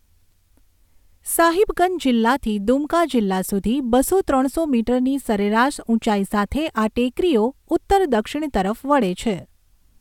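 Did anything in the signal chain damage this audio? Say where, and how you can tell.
No, nothing in this speech recording stood out as damage from any stage of the chain on listening.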